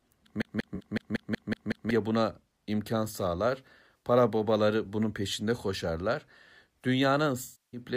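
A speech recording in which, from 0.42 to 1.9 s, just before "buna imkan sağlar", a CD stuck on one turn repeats the same 186 ms slice eight times. A scratch keeps knocking the laser back one track each revolution, so the sound stutters at a fast, even rate with a brief mute at every jump. On a waveform this shows as identical blocks tiled end to end with tiny gaps between them, and on a spectrogram as a repeating pattern cut by thin vertical seams. AAC frame loss with concealment strikes three times. The first lands inside that stutter at 0.75 to 0.81 s, lasting about 43 ms, which fits two lost frames. The second, right after "buna imkan sağlar" at 3.98 to 4.03 s, lasts 64 ms and points to three frames. Both short gaps sound smeared because the decoder rebuilds the missing audio from the last good spectrum with randomised detail. On a spectrogram they appear as blurred, texture-free patches. 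The third, at 7.43 to 7.80 s, runs about 300 ms, long enough that the concealment decays toward silence before the signal returns. This shows as a fading energy trough in the waveform and a dimming smear on the spectrogram.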